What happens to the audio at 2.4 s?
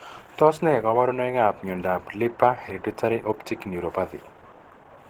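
At 2.4 s the speech sounds muffled, hoarse and grainy, and that damage runs through the whole clip. It is likely Opus compression in its hybrid speech mode. Too few bits leave the bands rough and noise-filled, which fits a rate near 16 kbps.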